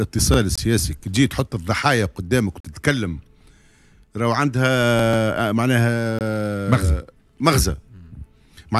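At 0.56 to 0.58 s, 2.60 to 2.65 s and 6.19 to 6.21 s, the sound drops to a block of digital silence. Each gap starts and ends abruptly. Gaps of 21 ms and 43 ms fit lost 1024- and 2048-sample blocks.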